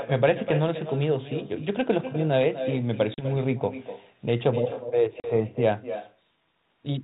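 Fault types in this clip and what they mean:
Echo with no canceller: the far end's loudspeaker feeds its microphone, so every phrase returns about 9 dB quieter, roughly a third of a second later.
Packet loss on an ADPCM call: two 40 ms holes, at 3.14 s and 5.2 s, after which the decoder's predictor briefly mistracks and the speech returns slightly distorted.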